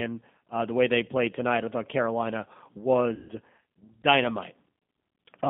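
G.729 coding runs throughout the speech. The 8 kbit/s codec rebuilds each 10 ms frame from a vocal tract filter, a pitch predictor and a few pulses, so the line passes only about 150 Hz to 3.5 kHz, and the rough, synthetic coding damage is plainly audible.

VoIP packet loss concealed by the speech codec occurs from 3.15 to 3.32 s. About 140 ms of audio is missing, which fits seven 20 ms packets. The decoder extends its last pitch and filter with falling gain, stretching the sound into a buzzy tone or coloured noise that fades, and the frame-to-frame dependence keeps it weak or distorted briefly afterwards.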